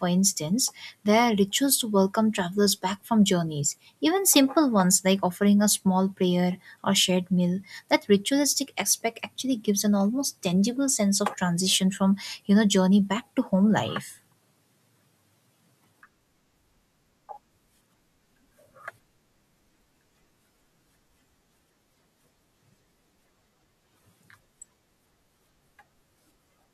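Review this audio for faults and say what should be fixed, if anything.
Nothing here needs fixing, as no technical faults turn up anywhere in this speech recording.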